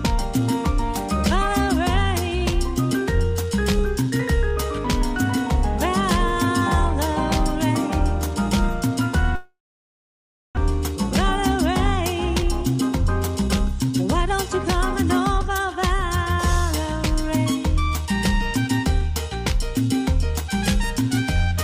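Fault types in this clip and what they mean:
Long network dropout: around 9.35 to 10.59 s the stream likely stopped arriving; a fading buzz gives way to near silence, and about a second of audio is lost.
Jitter buffer speed-up: from 12.43 to 16.04 s short pitch-period pieces are cut repeatedly, running about 5% fast at unchanged pitch, trimming roughly 200 ms of excess delay.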